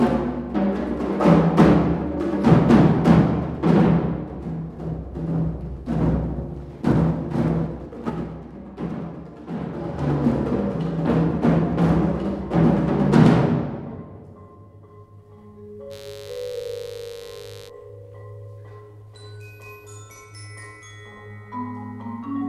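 From 6.83 to 8.32 s, a gain change is applied in unsmoothed 2 dB steps, dropping around 15 dB at roughly five steps per second. The result is zipper noise, a ticking that rides on the fading sound. From 9.73 to 10.09 s, the level climbs back around 15 dB in the same 2 dB steps, now roughly twenty per second, so the zipper clicks run faster.

From 15.89 to 17.71 s, switching spikes from a dimmer, rectifier or unshielded path enter twice per 50 Hz cycle. This produces a steady, raspy mains buzz about 25 dB below the signal.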